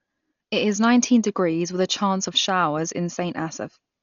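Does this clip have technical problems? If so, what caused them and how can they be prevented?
Yes. Throughout, the speech is dull with nothing above 6.9 kHz and rough, fluttering noise around tones, likely Dolby Digital compression at a bitrate around 40 kbps; unfunded lines get dither noise, not MP3's metallic swirl. Encode at a higher bitrate to prevent it.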